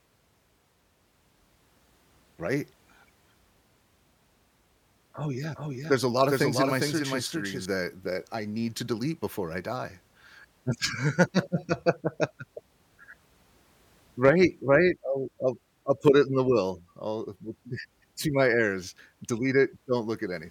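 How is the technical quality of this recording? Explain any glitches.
The recording has one glitch, a doubled audio track from 5.55 to 7.65 s, ending just before "that I need to". A slower second capture path likely mixed the speech in again, so a copy about 5 dB quieter trails by roughly 400 ms, with an abrupt start and stop.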